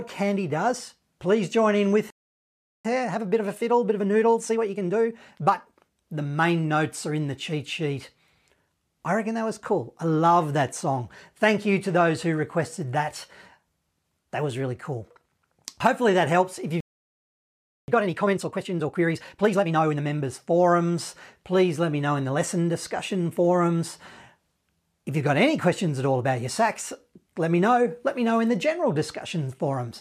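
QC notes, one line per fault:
2.10–2.85 s, playback stall: the speech cuts out mid-flow and the output sits silent for about 0.74 s before resuming. The likely cause is the player running dry of buffered data, or its output thread being blocked, so nothing reached the output until it recovered.
2.85–5.81 s, time-compressed catch-up: straight after the gap the speech runs about 1.25 times faster at unchanged pitch. The player is trimming its backlog by removing short slices and cross-fading the joins.
16.81–17.88 s, playback stall: a second, longer dropout of about 1.08 s, with the speech halting abruptly and then continuing. This is likely the same starvation or blocked-thread condition, held for longer before the output recovered.
17.88–20.02 s, time-compressed catch-up: the speech is hurried to about 1.5 times normal speed with pitch preserved. It runs faster than in the first catch-up because more audio is being cut out and spliced to clear the larger backlog.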